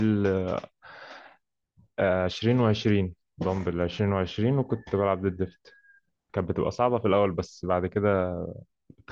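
Nothing here trips any alarms: the speech runs along without a single technical fault turning up anywhere.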